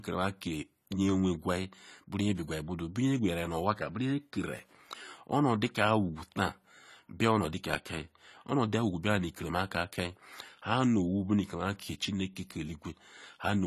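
AAC compression damage runs through the whole recording, likely from AAC-LC coding at a low bitrate; the plainly audible artefacts fit a rate around 32 kbps. The encoder splits the speech into frequency lines frame by frame and discards detail its hearing model deems masked. Here nothing survives above 14 kHz, so the top end sounds dull, and starved bands leave sibilants smeared and fizzy, with a warble on sustained sounds.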